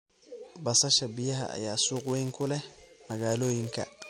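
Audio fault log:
1.95 to 4.10 s, filter restarted on every block: from 1.95 s to the end, a filter in the speech path drops its stored history at each block boundary and begins again from silence. Each restart leaves a small transient at the start of the block, and these repeat steadily, heard as a buzz at 188 Hz, which fits a 256-sample block. The buzz rides on the speech, growing louder and softer with the level of the voice.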